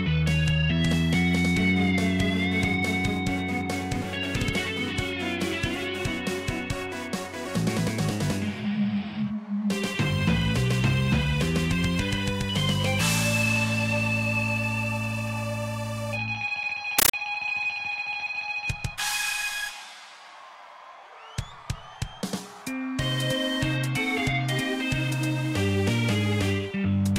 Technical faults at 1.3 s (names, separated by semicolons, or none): none